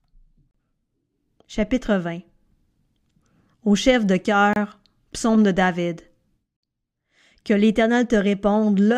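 Speech, broken three times by gaps between stream segments. The sound drops to silence at 0.51 s for about 34 ms, at 4.53 s for 27 ms (between "chef de" and "psaume de"), and at 6.57 s for 60 ms. The spacing fits 2-second segments whose timestamps don't quite meet, so the player inserts silence. Nothing is lost, but each hole has hard edges. It shows as a flat line on the waveform and a clean vertical blank band across every frequency on a spectrogram.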